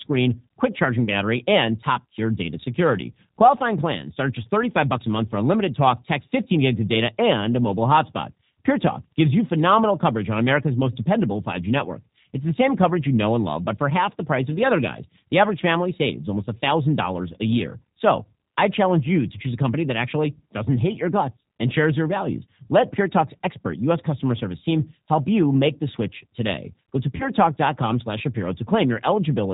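The whole speech clip has passed through the G.729 codec at 8 kbit/s, which rebuilds each 10 ms frame from a vocal tract filter, a pitch predictor and a handful of pulses, and passes nothing above 4 kHz. The damage is plainly audible: the voice is band-limited and dull at the top, with a rough, slightly synthetic quality.

At 1.05 to 1.08 s there is VoIP packet loss concealed by the speech codec. About 20 ms of audio never arrived, consistent with a single lost packet, and the decoder filled the gap by repeating its last pitch and filter settings at falling gain. The result is a brief smear, and the voice sounds weakened just after it.

At 27.16 to 27.28 s the same concealment happens again over a longer gap. About 40 ms went missing, which fits two lost packets. The extrapolated sound stretches out and fades, and the speech that follows stays thin and distorted for a short while as the decoder recovers.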